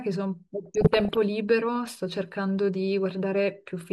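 Speech, with MP2 compression damage that is plainly audible throughout: the top end sounds dull as upper sub-bands drop out and flicker, and what remains has a coarse, gurgling graininess. This is likely Layer II coding starved of bits, which fits a rate around 80 kbps. From 0.66 s to 1.17 s there is DAB burbling, a muddy bubbling with squelchy chirps as individual sub-bands jump in level frame by frame. It points to reception bit errors of roughly one percent getting past error correction and corrupting samples and scale factors.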